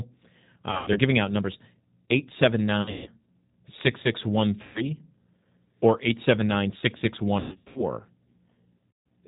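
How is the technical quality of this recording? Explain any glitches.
Quality's rough. The whole clip runs through a G.729 codec at 8 kbit/s, so speech sounds band-limited below 4 kHz, slightly gritty and synthetic.

There's also VoIP packet loss concealed by the speech codec at 0.71–1.00 s (just before "out numbers"), 2.82–3.08, 4.63–4.85, 7.40–7.82 and 8.91–9.05 s. The decoder stretches the last sound into a fading buzz or coloured noise for up to 160 ms at a time, and it stays weak briefly afterwards.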